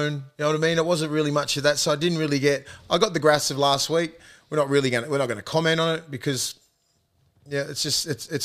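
Speech recording with no technical faults to report.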